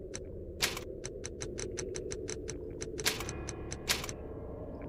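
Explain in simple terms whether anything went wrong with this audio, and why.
A doubled audio track appears between 1.43 and 3.13 seconds, likely because the same sound was captured a second time through a slower path and both copies were mixed together. You hear the original plus an identical copy trailing about a sixth of a second behind, just as loud. That makes everything sound stuttered and smeared, like a hard echo with no fading tail, and the copy switches on and off abruptly rather than blending in.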